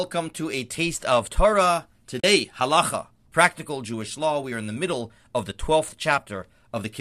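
At 2.20 s the speech drops into a brief silence lasting about 40 ms, ending at 2.24 s. This is AAC frame loss with muting: a short run of coded frames never reached the decoder, so it filled their spectrum with zeros. Because the codec's overlapping windows cross-fade into and out of the gap, the sound tapers down and back up rather than cutting off, leaving a soft-edged hole. The length fits four of the roughly 10 ms frames of the low-delay AAC stream likely carrying this audio.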